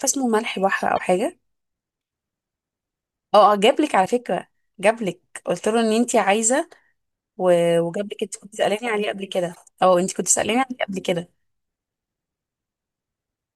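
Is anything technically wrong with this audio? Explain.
Yes. Short blips break into the speech at 0.95–1.00 s, 4.02–4.07 s and 9.52–9.57 s. This is damaged data in a compressed stream: corrupted bytes make the decoder misread frames, lose sync and jump to the next header.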